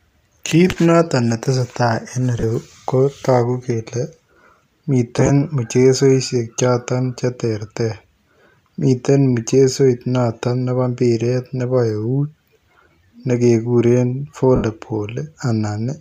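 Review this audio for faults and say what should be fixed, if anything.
Lost LE Audio frames break the speech four times. At 0.69 to 0.77 s, before "notoon ne tesetai", 22.5 ms drops out in short scattered gaps. At 2.40 to 2.43 s, before "ko taguu kele", 30 ms goes. At 5.17 to 5.30 s, before "mchezoisiek chotoon che terter", 45 ms is lost across 120 ms. At 14.56 to 14.64 s, one 82.5 ms gap occurs. The decoder patches each gap by repeating the last spectrum with scrambled signs. The sound smears into noise, and the longest gap sinks toward silence. To prevent this, strengthen the Bluetooth link with a closer device, less radio interference and a larger receive buffer.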